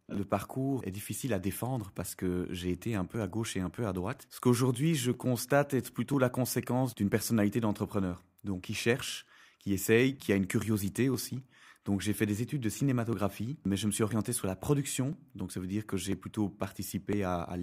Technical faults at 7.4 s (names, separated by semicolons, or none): periodic USB or driver dropouts